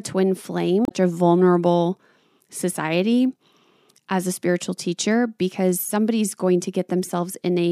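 From 0.83 to 0.92 s, damaged data in the compressed stream makes the decoder lose sync. A brief glitch results, then playback resumes at "a vulnerable society".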